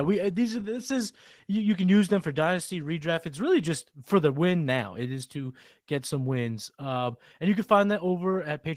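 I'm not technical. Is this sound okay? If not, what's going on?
No. Opus voice compression affects the speech throughout. To save space, the codec rebuilds the voice from a simplified model and codes the fine detail only coarsely, every 20 ms. That coarse detail is plainly audible, making the speech sound rough, hoarse and somewhat robotic.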